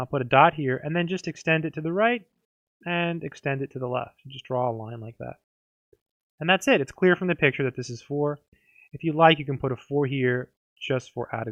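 No technical faults can be heard anywhere in the audio.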